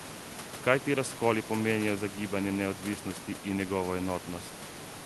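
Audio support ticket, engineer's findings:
Nothing stood out on listening to this speech clip, with the room background sitting about 12 dB below the speech and the call path's band-limited sound extending to roughly 12 kHz.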